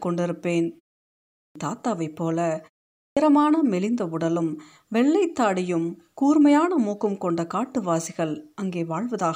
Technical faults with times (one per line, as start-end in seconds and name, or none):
1.38-1.55 clipped start after a pause
3.00-3.17 clipped start after a pause